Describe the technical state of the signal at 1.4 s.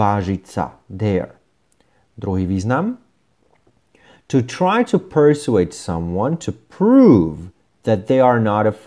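At 1.4 s the speech signal is intact, with no audible fault at that moment.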